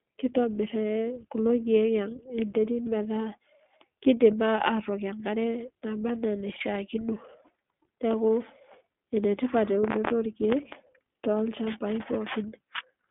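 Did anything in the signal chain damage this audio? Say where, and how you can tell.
Yes, at the codec stage, for the whole clip. This is iLBC coding: the speech sits in a telephone band of roughly 200 Hz to 3.5 kHz, with nothing above 3.7 kHz, and the rough, synthetic texture is plainly audible throughout. Each frame's excitation is coded independently, and the frame-rate grain fits 20 ms frames at about 15.2 kbps. A plain band-limiting filter would cut the top without adding this roughness.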